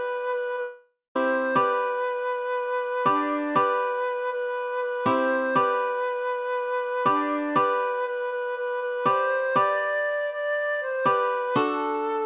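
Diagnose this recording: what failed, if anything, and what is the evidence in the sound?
Long network dropout, 0.61 to 1.16 s. At 0.61 s the sound turns into a fading buzzy continuation of itself, which decays into roughly 0.18 s of silence. At 1.16 s the audio resumes abruptly, and about 0.55 s of material is simply gone. That pattern points to the network stage. The likely cause is a run of lost packets on the G.711 call path, which is band-limited to 4 kHz. The receiver's concealment stretched the last good audio until it gave up, then muted until packets arrived again.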